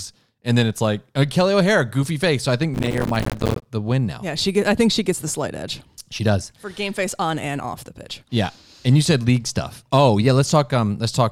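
Processor overload crackle runs from 2.74 to 3.66 s, starting just after "I think" and clearing before "the win now". Across that stretch the processor keeps failing to deliver its audio blocks in time, and each late block is replaced by silence. The blocks appear to be around 5 ms long, and on the order of a hundred drop out in close succession. Those dense, hard-edged gaps chop the speech into a gritty, crackling tear that stops as soon as the load eases.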